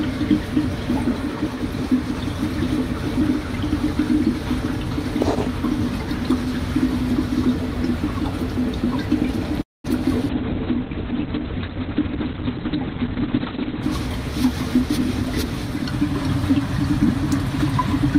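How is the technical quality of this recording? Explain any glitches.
The recording has three clear network-related glitches in its second half.

At 9.61 s, a call audio freeze: packets were likely held up and the jitter buffer ran empty, leaving a gap of about 0.25 s, mostly silent.

From 10.30 s to 13.88 s, a call bitrate drop: the encoder fell from 64 kbps to 6 kbps, and bandwidth shrank from 20 kHz to 4 kHz, so the sound turns coarse and muffled.

From 13.26 s to 16.21 s, a jitter buffer speed-up: the receiver trimmed short pitch periods to reduce the delay, so the sound runs 7% faster at the same pitch and feels hurried, losing roughly a fifth of a second.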